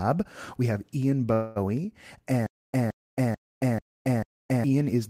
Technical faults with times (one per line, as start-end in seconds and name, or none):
1.33-1.58 call audio freeze
2.46-4.64 stutter with silent gaps